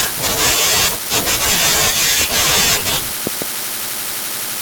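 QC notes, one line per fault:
2.21–2.24 s and 3.27–3.44 s, loud pop: a single pop a few dB above the speech, then a double pop about 10 dB above it. A sudden voltage pulse, likely from a switch, plug or static discharge, lands on the signal while speech continues underneath.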